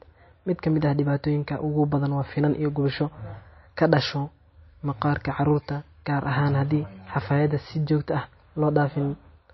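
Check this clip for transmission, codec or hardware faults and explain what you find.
There's one codec fault running through the whole speech recording, likely MP3 compression. Everything above 5.8 kHz is gone, so s sounds lose their edge. The bit-starved encoder drops weak frequency lines frame to frame, giving a plainly audible watery swirl that suggests a bitrate near 27 kbps.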